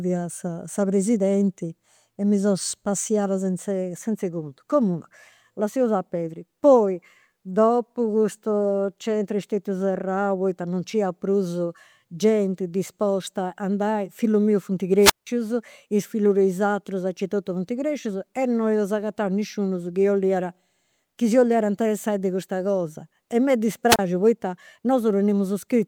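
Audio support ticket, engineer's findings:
Wireless microphone squelch dropout, 14.98–15.27 s (173 ms mute) and 23.88–23.99 s (31 ms mute). RF fade trips receiver squelch. Hiss rise before silence distinguishes it from digital dropout.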